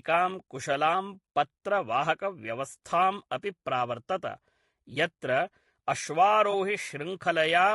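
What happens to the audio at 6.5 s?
Right around 6.51 to 6.54 s there's a short AAC frame loss with concealment: roughly 20 ms of data went missing, which fits a single dropped frame, and the decoder patched it from the last good spectrum, so you get a brief smeared, noisy blip rather than a gap.

Underneath that, the whole clip has a rough, grainy edge, with noise creeping between the harmonics and a thin, synthetic-sounding top end. That's likely low-delay AAC compression (AAC-ELD), which fits a bitrate around 32 kbps, where the short frames can't resolve pitch detail cleanly.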